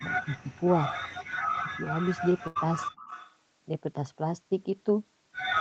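From 0.01 to 0.63 s the speech dips by up to about 10 dB, in patches totalling roughly 0.4 s. It happens again from 1.77 to 1.94 s, dropping by up to about 15 dB. The likely cause is speech suppressed in double talk: with both sides talking at once, the echo canceller could not tell this talker from its loudspeaker echo and turned everything down.

A faint, delayed copy of the speech appears briefly at 1.62 to 1.68 s, about 15 dB below the direct sound. It returns for longer, from 1.98 to 3.35 s, at about 10 dB down. Both copies trail by 306 ms. This is likely echo leak, where loudspeaker sound reached the far-end microphone, slipped past its echo canceller and came back.

Inside that stretch, from 2.47 to 2.57 s, the sound freezes into a held sound that fades for 79 ms. Then it jumps ahead, with 80 ms missing. This is a burst of packet loss: the receiver stretched the last audio to cover the gap, then resumed later.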